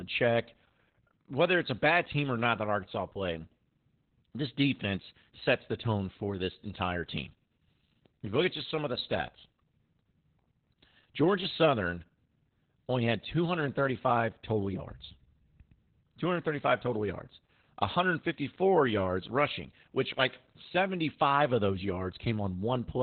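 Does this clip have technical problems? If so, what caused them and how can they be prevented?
Yes. Opus voice compression runs throughout: the speech sounds muffled, hoarse and faintly robotic, with nothing above 4 kHz. That narrowband, coarsely coded SILK sound fits an Opus stream at roughly 8 kbps. Encoding at 24 kbps or more for wideband or fullband voice would prevent it.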